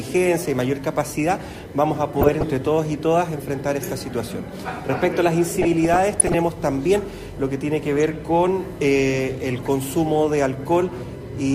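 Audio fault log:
Throughout: USB whine. A steady whine of fixed pitch sits under the sound. Its fundamental is 1 kHz, and its strongest component is the harmonic at 2 kHz. It is about 35 dB below the programme. The USB bus draws current in 1 ms frames. That pulsing leaks into the audio through the shared power or ground. The result is a tone locked to the frame rate, with its harmonics.
2.21–2.44 s, 5.49–6.38 s, 7.99–8.16 s, 9.56–9.67 s: DAB burbling. Bursts of burbling break over the sound. The longest burst, at 5.49 s, lasts almost 0.9 s. Reception was weak. Bit errors, at a rate of roughly a few tenths of a percent, slipped past the error correction into the MP2 data. Corrupted samples put short blips of noise into single sub-bands, and corrupted scale factors make sub-bands jump in level for up to a frame. That gives the burbling texture.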